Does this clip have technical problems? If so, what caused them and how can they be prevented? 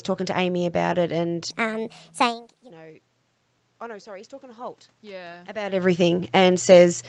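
Yes. From 1.50 to 2.70 s, a section at the wrong speed plays back 1.36 times faster than it was recorded, so the speech turns hurried and rises by about five semitones. The likely cause is a player or editor running that stretch against the wrong clock. Tempo and pitch shift together and snap back at the edges, which separates it from a pitch-only effect or the talker moving around 2.0 s. Keeping one shared clock and sample rate through playback and editing prevents it.

From 3.79 to 6.10 s, automatic gain rises. After the input dropped by about 22 dB, the control slowly brought the level back up by about 5 dB over more than two seconds. What separates this from the talker moving closer around 5.5 s is that the room noise swells along with the speech, since the whole signal is being amplified. A steadier microphone distance and slower, capped gain adaptation prevent the audible creep.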